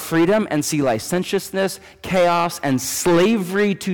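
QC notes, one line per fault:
Throughout: hard clipping. The speech is driven about 12 dB past the available headroom, so roughly 7 percent of samples hit the ceiling and are sliced flat. That produces harsh high-frequency fuzz on every loud syllable, not the rounder, warmer grit of soft saturation.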